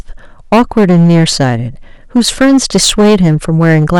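Hard clipping runs through the whole speech clip. The signal drives about 10 dB past what one stage can pass. Roughly a tenth of the samples hit the limit and are cut flat. Every loud syllable carries a harsh, buzzing fuzz.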